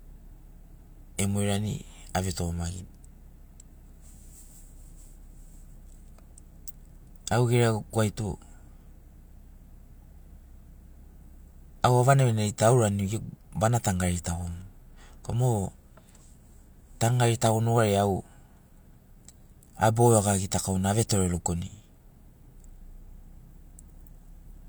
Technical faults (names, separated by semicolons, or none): none